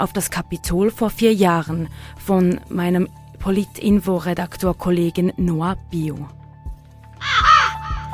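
No technical faults are audible.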